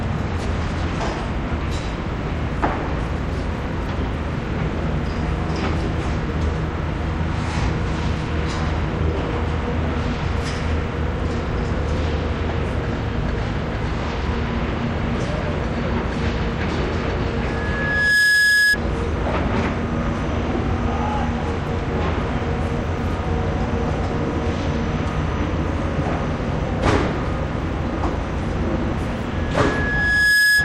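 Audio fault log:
17.41–18.77 s and 29.32–30.64 s, loudspeaker feedback squeal: A single steady tone at 1.7 kHz swells up over the sound and then holds. It takes under a second to build the first time and about a second the second time. It ends up around 5 dB above the sound. A microphone was picking up its own loudspeaker, and at 1.7 kHz the loop gain passed one, so that tone fed itself. The second squeal runs to the end.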